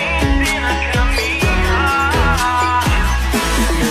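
Nothing in this short bit of audio stands out as a technical fault; it just runs along without any glitch worth pointing to.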